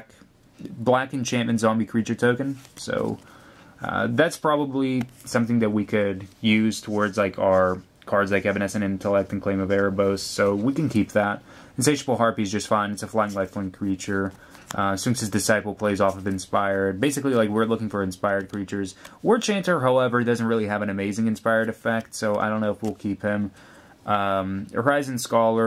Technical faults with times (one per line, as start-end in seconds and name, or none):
none